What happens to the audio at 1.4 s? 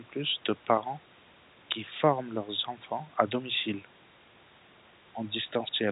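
Nothing goes wrong at 1.4 s: the speech passes through intact, carrying only the narrow telephone band of its G.711 coding, with nothing above 4 kHz.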